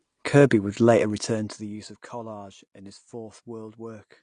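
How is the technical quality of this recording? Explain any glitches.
The recording has two audible faults: codec damage throughout and zipper noise in the first half.

The speech is dull and band-limited for the whole clip. Nothing is heard above 9.8 kHz, and the coding damage is plainly audible. The likely cause is AAC compression. AAC-LC splits the signal into frequency lines and spends bits where a hearing model says they matter. At a low rate, which fits roughly 32 kbps, the encoder cuts off the top band.

From 0.98 to 2.05 s there is zipper noise. The level falls by about 20 dB, but not smoothly. It drops in 2 dB steps, roughly fifteen a second. Each step is an abrupt jump in gain, and each jump makes a small click. Together the clicks form a ticking, zipping texture that rides on the speech while the level moves down.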